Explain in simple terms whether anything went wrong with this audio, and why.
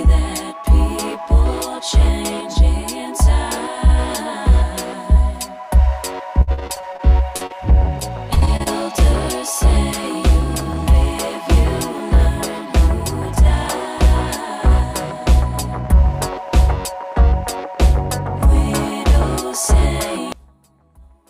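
Repeated packet loss (robotic sound) hits twice: from 6.41 to 7.01 s, with eight gaps of up to 58 ms and about a third of that stretch patched over, and again from 8.00 to 8.68 s, with six shorter gaps of up to 29 ms. Each time data failed to arrive, the receiver covered the hole by stretching the last bit of sound. With holes following one another so closely, the audio turns choppy, with pieces missing.

Short concealed packet loss appears twice between those bursts, at 7.37 to 7.42 s and 7.46 to 7.52 s. Each is a single tiny dropout of a few hundredths of a second. The receiver filled each gap by carrying the previous sound forward, then blended back into the real audio. You hear a quick smear or wobble rather than silence, and a very short sound can go missing.

One channel inverted is the likely cause of what happens from 20.32 s to the end. The sound suddenly nearly vanishes, leaving only a faint trace. 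When one side of a stereo signal is flipped upside down and the two sides are combined, everything they share cancels out, so the main sound disappears.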